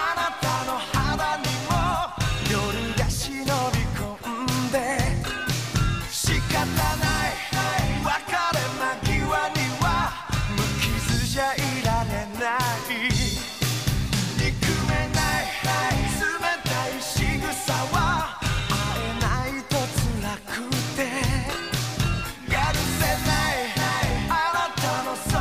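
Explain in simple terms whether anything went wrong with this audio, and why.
Nothing went wrong; no faults can be heard.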